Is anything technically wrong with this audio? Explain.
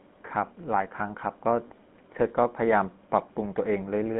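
Yes, there are two faults.

Throughout, the speech sounds buzzy and gravelly, with a dull, band-limited tone running from about 150 Hz to 3.5 kHz. This is the GSM full-rate codec, which fits 13 kbps. It rebuilds speech from a vocal-tract model driven by sparse, regularly spaced pulses. That coarse excitation causes the plainly audible roughness.

From 1.68 to 1.71 s, the sound briefly freezes into a short rough, metallic ring. This comes from lost GSM frames, likely a single 20 ms frame. The decoder filled the gap by repeating the previous good frame's settings, so the held sound rings instead of continuing naturally.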